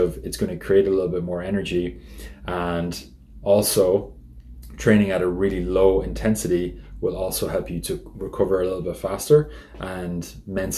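No technical faults can be heard in this audio, so there is nothing to describe in time order.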